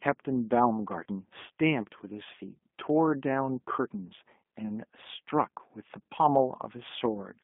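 Throughout the speech, the sound is thin and boxed-in, confined to roughly 200 Hz to 3.5 kHz, with a plainly audible roughness and a slightly synthetic edge on voiced sounds. This is the G.729 codec at work: the decoder rebuilds each 10 ms frame from a vocal tract filter, a pitch predictor and a handful of pulses rather than the original waveform, which fits the 8 kbit/s G.729A variant over a narrowband line.

From 1.04 to 1.06 s there is a brief smeared patch where the voice loses its detail and sags in level, and it sounds weak and distorted for a short while after. That is VoIP packet loss concealed by the speech codec. About 20 ms of audio went missing, consistent with a single lost packet, and the decoder filled the gap by repeating its last pitch and filter with falling gain, so the following frames recover gradually.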